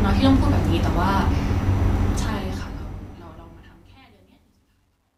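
From 2.07 s to the end at 5.18 s, the speech fade-out shows truncation distortion on a fade. The fade itself starts around 2 s, but the gain stage keeps only 11 bits with no dither, so the decaying waveform collapses into coarse square steps. From 3.49 s onward it turns gritty. The waveform shows staircase shapes, and a spectrogram shows broadband hash instead of a smooth taper.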